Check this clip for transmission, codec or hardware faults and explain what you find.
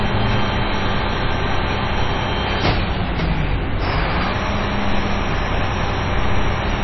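One codec fault runs through the whole clip. Throughout, the sound has plainly audible MP3 compression. Nothing is heard above 5.8 kHz. The texture turns watery and swirly, and attacks smear. The likely cause is an MP3 encoder starved of bits, which fits roughly 22 kbps.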